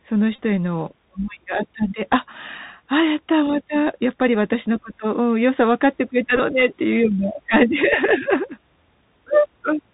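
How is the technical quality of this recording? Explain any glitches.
Quality is limited by a narrowband headset link throughout, with two brief buzzing glitches.

The whole clip carries Bluetooth CVSD headset codec damage. The one-bit, adaptive-step coding at 64 kbps cuts everything above 4 kHz, roughens sibilants, and leaves a granular hiss under the speech.

Bluetooth headset packet repeats occur at 0.36 to 0.40 s and 6.36 to 6.39 s. Lost voice packets were replaced by redecoding the previous packet's bits, so the sound turns into a short buzz near 267 Hz. The first lasts about 26 ms, which fits roughly seven lost packets. The second is scattered over about 30 ms, with its longest continuous run around 15 ms.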